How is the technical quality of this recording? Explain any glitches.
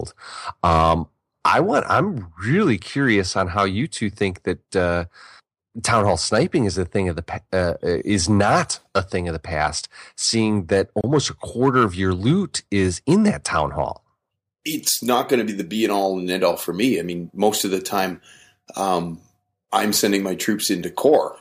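The recording has one audible glitch, a gap at a join of encoded pieces, from 11.01 to 11.04 s. The speech was encoded in separate sections that were spliced without trimming, so the encoder's start-up silence and the padding on the previous section's final frame both stayed in at the seam. The result is a dropout of about 27 ms, with edges smeared by the codec, after which the speech resumes where it left off.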